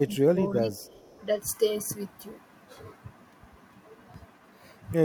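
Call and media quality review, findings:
Speech suppressed in double talk, 0.0 to 1.09 s: level dips by up to about 15 dB across roughly the first second. Likely cause is the echo canceller on the far-end loudspeaker path: unable to tell local talker from returning echo while both sides speak, it attenuated both.

Echo leak, 0.75 to 1.23 s: faint delayed copy of the talker, about 35 dB below the direct speech, trailing by 364 ms. Likely residual echo the canceller left in the loudspeaker-side microphone pickup and sent back into the call.

Processor overload crackle, 4.14 to 4.36 s: short gritty tearing riding on the speech. Audio DSP repeatedly missing buffer deadlines. Each late buffer is skipped outright, leaving a hard-edged gap. The texture fits very short buffers under a millisecond, with a handful missed.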